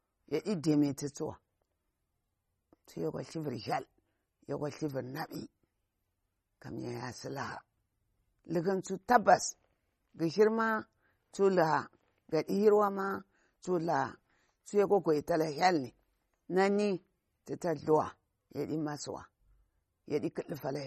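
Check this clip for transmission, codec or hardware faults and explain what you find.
One codec fault runs through the whole recording. From start to finish the speech sounds watery and swirly, with metallic chirps on s sounds and nothing above 13.2 kHz. This is likely MP3 compression at a starved bitrate, consistent with about 32 kbps. The encoder cuts the treble at a fixed frequency and drops weak frequency lines, which flicker on and off between frames.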